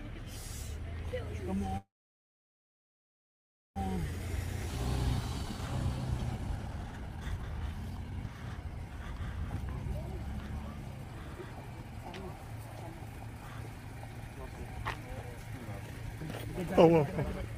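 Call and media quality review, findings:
Call audio freeze, 1.77 to 3.78 s: likely packets held up in transit, jitter buffer ran dry. Last sound continued briefly, then about 1.9 s of silence; playback resumed where it stopped, adding a 2 s gap with nothing lost.

Jitter buffer speed-up, 3.97 to 8.50 s: buffer overfull after the stall, receiver trimming short pitch-period chunks repeatedly to shed the added delay. Audio runs at 121% speed, pitch unchanged, sounding hurried; roughly a second of backlog removed.

Skip ahead at 4.66 s: during the catch-up, a block of queued audio was discarded rather than compressed, possibly on buffer overflow. Playback jumps forward with no gap; roughly a second of audio missing, the two sides butted together almost directly.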